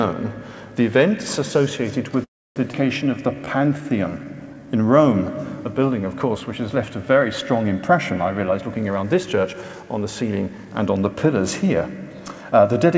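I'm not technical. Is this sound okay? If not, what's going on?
No, there are four problems. Call audio freeze, 2.24 to 2.59 s: the sound stalls for about a third of a second, mostly silent, likely because data was delayed in transit. Nothing is lost, but a pause is added.

Skip ahead, 2.72 to 2.76 s: playback jumps forward, dropping roughly a fifth of a second of sound and joining the two sides almost directly.

Jitter buffer slow-down, 3.08 to 4.67 s: the system repeats tiny slices to build a reserve, so sound plays at 88% speed, stretched without changing pitch.

Jitter buffer speed-up, 8.38 to 10.80 s: the system removes tiny slices to catch up, so sound runs at 113% speed and seems hurried, losing roughly 0.3 s.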